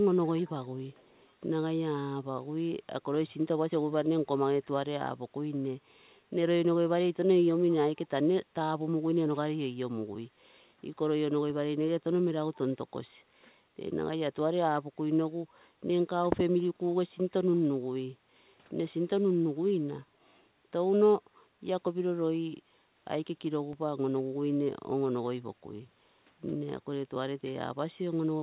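From 0.38 to 0.50 s and 0.92 to 1.28 s, a faint echo leak trails the speech by about 318 ms, far below the speech. Likely a loudspeaker echo the far-end canceller missed. At 23.73 s, a DC step in the zero line gives a low thump, then decays through a 5 Hz high-pass. The speech runs on unchanged through it.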